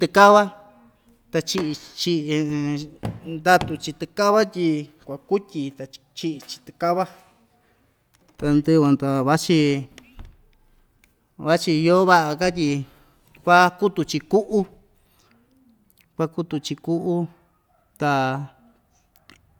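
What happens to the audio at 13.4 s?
Nothing goes wrong at 13.4 s: the speech carries straight through that moment without any dropout, click, distortion or other fault.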